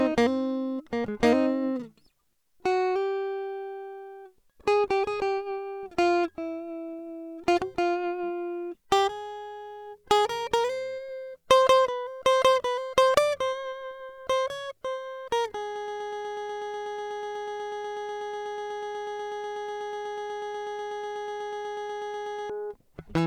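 From 15.76 s to 22.50 s the music sticks in a broken-record loop: one 0.12 s fragment repeats exactly, 55 times, and the intended music is lost. A stalled player likely kept resending its last piece. A spectrogram shows one identical block tiled every 0.12 s.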